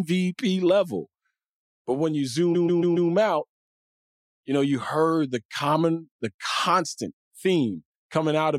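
From 2.54 to 3.10 s the speech stutters. This is repeated frames. A block of compressed audio about 139 ms long plays once and then four more times in a row. The length of that block fits a run of about six frames. The decoder simply played the same stretch again and again. This adds about 557 ms to the clip. The result is a rapid, mechanical repetition of the same short fragment before the speech moves on.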